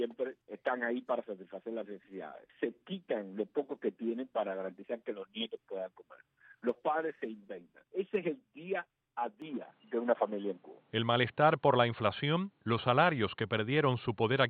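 At 9.42 s the sound abruptly goes dull and boxy and stays that way to the end at 14.50 s, with no gap at the changeover. Everything above about 4.4 kHz is gone, the level shifts by about 5 dB, and a faint new noise floor sits well under the signal. That combination of a narrower band, a different level and its own background is the signature of an input switched to a poorer device, likely a fallback mic or a headset call profile taking over mid-recording.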